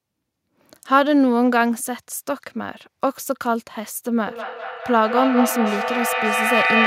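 The clip is speech, and from 4.26 s to the end it suffers feedback echo between two devices. The sound keeps coming back about every fifth of a second. The repeats are strong, reaching about 1 dB below the speech itself. Two devices in the same room are on one call. One plays out what the other's microphone sent, and that microphone picks it up again. Each device's echo canceller removes only its own playback, so this loop goes unchecked.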